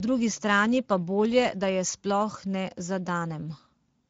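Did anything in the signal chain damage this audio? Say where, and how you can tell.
Yes. The damage sits at the codec stage: the speech was passed through the Speex codec, and its artefacts run through the whole clip rather than appearing at any single moment. Speech has a noisy, hoarse grain, because the CELP coder has too few bits to model the excitation faithfully. The spectrum stops dead at about 7.7 kHz, which marks a wideband mode. The plainly audible roughness points to a mid-to-low setting, which fits a rate of around 17 kbps.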